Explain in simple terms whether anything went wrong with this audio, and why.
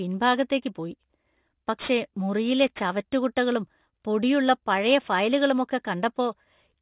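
Aliasing runs throughout: high hissy sounds fold back below about 4 kHz as gritty, metallic tones, rather than simply going muffled, which fits a careless drop to 8 kHz.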